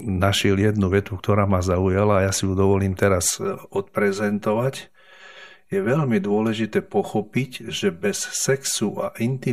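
From 3.30 s, just after "ju dovolím", to the end, one channel runs roughly 5 ms behind the other before the two are summed to mono, causing channel delay (comb filtering). Cancellations carve regularly spaced notches starting near 100 Hz, leaving the speech hollow and phasey.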